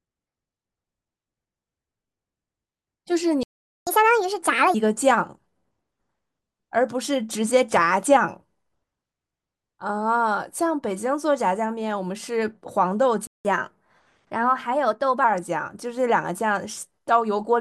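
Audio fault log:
3.43 to 3.87 s: playback stall. The speech cuts out for about 437 ms, likely because the player ran short of data, then resumes.
3.87 to 4.74 s: catch-up at higher speed. Playback runs 1.5 times fast to recover lost time, so pitch jumps roughly seven semitones.
13.27 to 13.45 s: playback stall. Sound drops out for about 179 ms, likely a starved or blocked player, before continuing.
13.45 to 15.24 s: catch-up at higher speed. Speed rises to 1.1 times, lifting pitch about one and a half semitones until normal rate returns.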